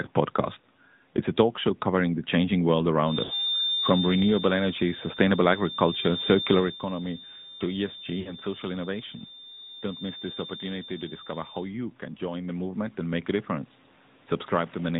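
AMR narrowband mobile codec, heard from start to finish: the speech is squeezed through 8 kHz sampling and a vocal-tract model, so nothing above 4 kHz survives. The buzzy, plainly synthetic tone points to a mid-rate mode of roughly 10.2 kbps.

Lost AMR speech frames at 0.62 to 0.65 s, 3.24 to 3.35 s and 8.20 to 8.36 s: corrupted frames made the decoder repeat its last pitch and filter settings at falling gain. The first is a brief 20 ms warble. The later two sound like runs of about 60 ms that smear and fade before the voice returns rough.

Automatic gain rising from 12.19 to 13.78 s: the gain control judged the input too quiet and lifted it by about 6 dB over roughly one and a half seconds. The voice and room noise swell together, unlike the natural level change near 6.5 s, where the talker moves relative to the microphone.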